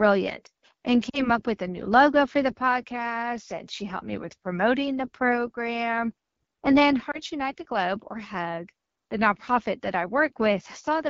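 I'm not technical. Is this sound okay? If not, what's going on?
No. The whole recording sounds rough and raspy, with a grainy edge on every sound. That's the AMR wideband (HD Voice) codec, the phone network's voice compression, running at one of its lowest quality settings, where it simplifies the voice too heavily to sound clean.

There are also two brief glitches from lost AMR speech frames. From 1.09 to 1.29 s, just before "up with a new", the sound dips to near silence, then returns weak or rough for a moment. From 7.11 to 7.22 s there's a shorter brief dip or warble. Radio errors spoiled small pieces of the signal, so the phone guessed at them by repeating what came before at fading volume.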